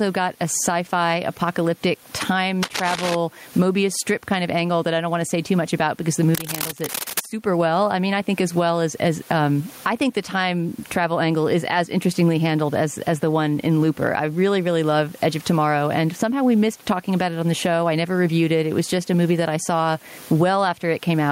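A speech recording with gain pumping throughout. The level breathes audibly. The swing is large, somewhere around 15 dB. Loud and quiet passages sit too close together, so the speech sounds squashed. The likely cause is input gain set far too high, with a fast limiter or compressor clamping down on every peak and releasing in the gaps. The room noise sits about 36 dB below the speech. Two bursts of cable scratch noise also cut across the speech, from 2.62 to 3.15 s and from 6.35 to 7.28 s. Each is a dense, ragged crackle, roughly as loud as the speech itself. It sounds like rustling or scraping laid over the signal. This likely comes from a worn cable, connector or control being moved, its contact resistance jumping about rapidly while it shifts.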